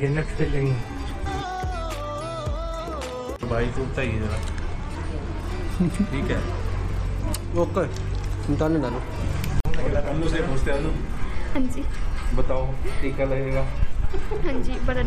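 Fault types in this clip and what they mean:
Gap at a join of encoded pieces: at 9.60 s the sound drops into a silence of about 49 ms, ending at 9.65 s, and then resumes exactly where it left off. Two separately encoded segments were butted together without trimming, so the padding at the end of one and the encoder's start-up delay at the head of the next both remain, leaving a hole with sharp edges softened by the codec.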